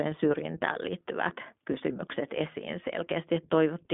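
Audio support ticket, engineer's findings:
Rough, slightly synthetic speech, dull and boxy, whole clip. Nothing above about 3.7 kHz, line band roughly 200 Hz to 3.5 kHz. iLBC codec: 20 ms frames coded independently, frame-to-frame roughness; fits the 15.2 kbps mode.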